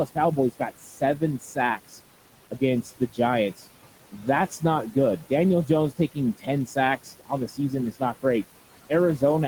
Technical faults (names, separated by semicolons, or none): noise suppressor artifacts; speech cut by the noise suppressor